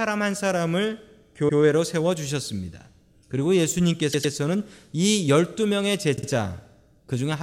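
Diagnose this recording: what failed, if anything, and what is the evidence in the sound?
Repeated frames in the codec stream: runs of compressed frames were duplicated, so the decoder replays the same slice of speech as a stutter. A 104.5 ms block repeats once at 1.48 s and twice at 4.12 s, and a 52.2 ms block twice at 6.15 s.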